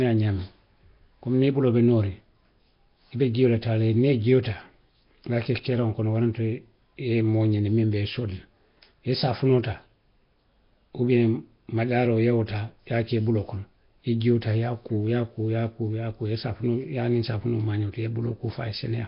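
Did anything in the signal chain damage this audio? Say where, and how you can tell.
Yes. The codec stage did it, most likely Nellymoser compression (Flash's Asao codec), heavily applied across the whole clip. The speech sounds rough, hissy and smeared, as if underwater. A spectrogram shows nothing above 5.3 kHz, blocky time smearing, and noise-filled patches where weak bands got no bits. The bitrate fits roughly 22 kbps.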